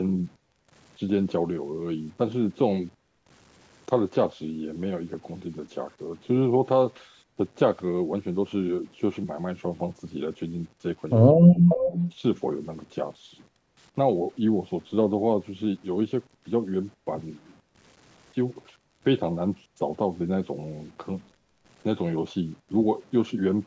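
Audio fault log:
throughout: low bit depth without dither. The speech was likely reduced to about 8 bits by plain truncation with no dither, so the rounding error tracks the signal instead of spreading as steady hiss. That error sits roughly 30 dB below the speech, making quiet passages and word tails sound gritty and grainy. The distortion changes texture as the level moves, and the softest moments sputter or collapse toward silence. The call's microphone processing passes nothing above 8 kHz.
11.29–11.81 s: speech suppressed in double talk. Both ends were likely talking at once, and the echo canceller, unable to tell the near talker from loudspeaker echo, clamped its output. For about half a second the speech dips sharply, at its deepest by roughly 35 dB.
11.68–12.13 s: echo leak. Loudspeaker sound that the loudspeaker side's canceller likely failed to remove was sent back down the line. 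A copy of the speech arrives 363 ms late, about 10 dB below the direct signal, overlapping the tail of the suppressed stretch. It is heard as a delayed repeat trailing the original.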